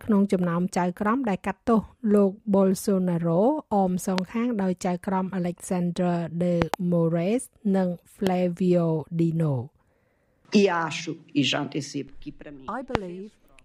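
Loud pops hit at 4.18, 6.62 (a quick double, through 6.76), 8.27 and 12.95 s, sharp thumps well above the sound, likely voltage spikes from a plug, switch or static.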